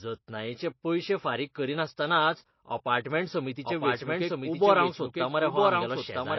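An encoder short of bits, likely MP3 compression at a low rate consistent with about 24 kbps, runs across the whole recording. It has cut everything above 5.8 kHz and dropped weaker frequency lines that flicker on and off between frames. The speech sounds dull and watery, with a swirling, metallic edge on sibilants and softened consonant attacks. The codec damage is plainly audible from start to finish.

From 3.65 s to the end, a second copy of the speech is mixed in, likely from a slower capture path or an edit that left two versions overlapping. This doubled audio track trails the original by roughly a second and sits about 5 dB lower. It carries no reverb or room colour, so it sounds like a flat, full-band repeat. It cuts in abruptly at 3.65 s and talks over the main signal until the end.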